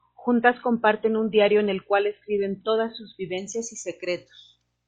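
From 0 to 3.38 s the player plays an adaptive stream starting at a low bitrate, before it measures the connection. The speech is dull and artefact-laden, with nothing above 4.1 kHz, which fits 24 kbit/s MP3, then jumps gaplessly to fuller sound fitting 128 kbit/s.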